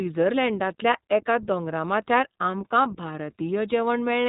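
Throughout, the iLBC codec codes each frame independently, consistent with its 20 ms mode. It removes everything above 3.8 kHz and leaves the speech plainly rough and synthetic.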